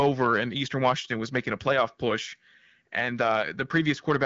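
Hard clipping runs throughout the speech: peaks pushed about 3 dB past the limit are cut flat on a small fraction of samples. The result is brief crackle on loud moments, not the constant rasp of low-rate codec coding. The AMR wideband (HD Voice) band stops at 7.5 kHz and stays clear.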